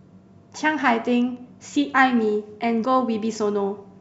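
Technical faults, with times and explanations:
2.84 s, compressed frames skipped: the speech jumps forward abruptly, losing roughly a fifth of a second, and the join is a short smeared blip rather than a sharp click. Whole blocks of compressed audio were never played, either missing from the file or rejected by the decoder as damaged, so playback resumed further on. The size of the gap fits about ten frames of around 26 ms each, and because neighbouring frames overlap, the seam blurs instead of snapping.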